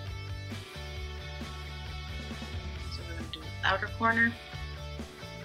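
No dropout, distortion, glitch or level problem is audible anywhere in the audio.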